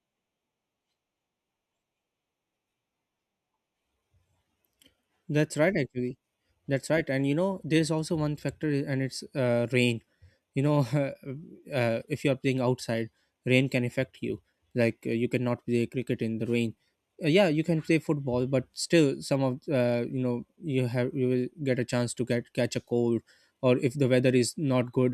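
No technical faults can be heard in the signal at any point in the recording.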